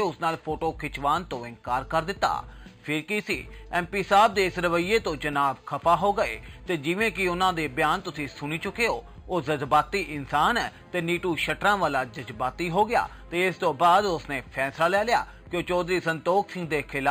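Imaging from linear upsampling throughout: a dulled top and faint metallic shimmer from images at 5.5 to 11 kHz, roughly 25 dB down, fitting 11 kHz material raised to 44.1 kHz.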